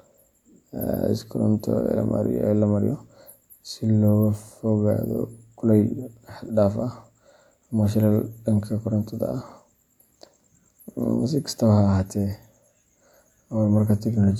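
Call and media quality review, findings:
No audible faults found.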